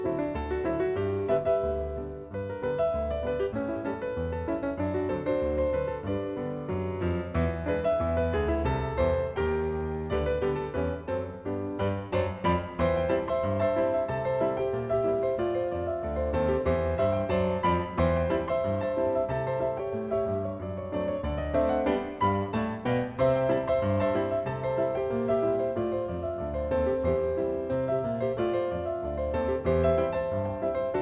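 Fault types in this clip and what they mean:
No faults are audible anywhere in this clip.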